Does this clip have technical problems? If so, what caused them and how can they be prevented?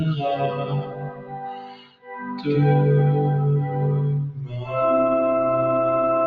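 Yes. A noise suppressor applied to music, built for speech, runs across the whole clip. It treats held tones and reverb as noise, so the level pumps by around 15 dB while attacks survive. On a waveform the envelope breathes irregularly. On a spectrogram, sustained partials flicker and fade behind bright onsets. Prevent it by switching suppression off, or into a music mode, whenever music is captured.

Sound cut by the noise suppressor appears from 0.42 to 2.47 s, where it drops by about 18 dB, and from 4.31 to 4.74 s, where it drops by about 11 dB. Sustained material and decays are pulled down harder than everything else. The waveform shows the envelope caving in, and the spectrogram shows held bands dimming and tails ending abruptly. Prevent it by bypassing the suppressor or greatly reducing its depth for non-speech sources.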